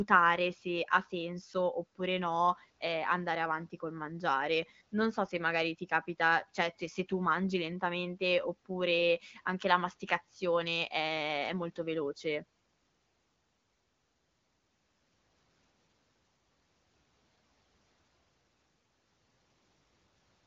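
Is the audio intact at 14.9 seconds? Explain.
Yes, the audio is intact at 14.9 seconds, with the speech passing cleanly through the AMR wideband (HD Voice) codec at that moment.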